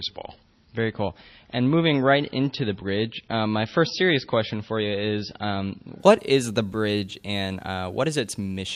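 Speech, with an adaptive stream starting at a low bitrate: nothing above 6 kHz until 6.0 s, then a gapless jump in quality, which fits 24 kbit/s MP3 stepping up to 128 kbit/s.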